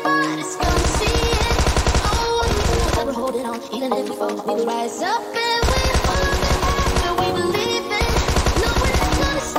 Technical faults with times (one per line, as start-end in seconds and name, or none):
0.00-9.58 DECT cordless phone buzz
2.36-4.74 time-stretched section